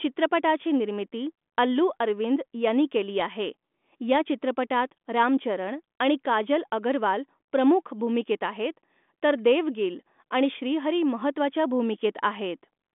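No technical faults can be heard in the speech, which arrives over a G.726 ADPCM telephone path at 40 kbit/s with a line band of 200 Hz to 3.5 kHz and nothing above 3.8 kHz.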